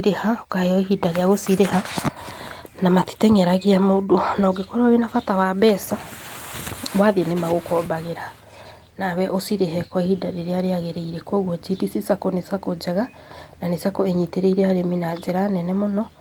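No technical faults can be heard anywhere in the speech, so there are none to set out in time order.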